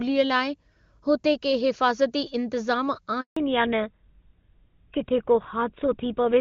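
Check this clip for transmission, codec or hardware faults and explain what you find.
Two linked faults show up, both starting right in the middle of the clip.

From 3.21 to 3.37 s there's a handover gap. The call jumped networks, no frames arrived for 160 ms, and the speech simply cuts out to silence.

From 3.37 s to the end there's a fallback to narrowband. Before the switch the HD Voice sound is clean and full, which points to AMR-WB at its top rate. After it, nothing above 4 kHz survives, which fits GSM full rate, and the speech turns dull and rougher.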